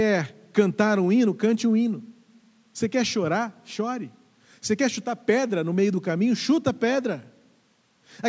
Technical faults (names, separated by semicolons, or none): none